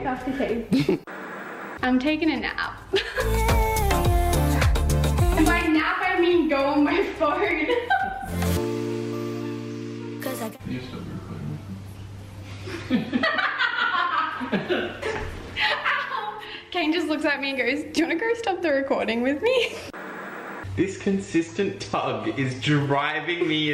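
At 7.51 s and again at 19.47 s, the time stamps of neighbouring segments overlap, with the audio apparently delivered in 4-second chunks. The player trims the overlapping stretch even though that sound was never duplicated, so about 6 ms and then 11 ms of real audio disappear. Each time the waveform jumps straight across the gap, which is heard as a brief click or tiny skip. This is overlap between stream segments.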